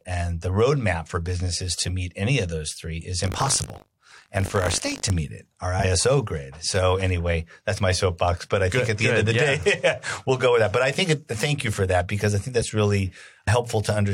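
Speech, with two faults. From 3.22 to 5.11 s, after "of those three is", buffer tearing adds a steady robotic buzz at 50 Hz, the rate at which the playback buffer cycles. A small slice of each period repeats audio from about 70 ms earlier. Unlike a one-off glitch, it persists wherever there is speech in that stretch. Compressed frames are skipped three times: at 5.78 to 5.85 s, right after "meet it our", about 70 ms is lost; at 7.73 to 7.79 s and 12.61 to 12.64 s, after "that because I think", about 20 ms each. Each is a single forward jump with a brief blip or click at the join, not a recurring buzz.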